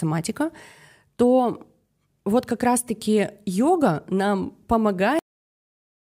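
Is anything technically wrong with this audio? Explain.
Yes. The speech has a cut-off end at 5.19 s. It stops in the middle of a sound. The final buffers were never written out, so there is no natural decay. The audio falls straight to digital silence and stays there until the end.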